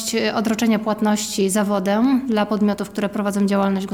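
A train of clicks ticks over the audio from 2.05 to 3.64 s: around five similar pops at an uneven pace of about 2.5 per second, peaking roughly 5 dB above the signal. This is likely interference from nearby equipment or a faulty connection or power supply.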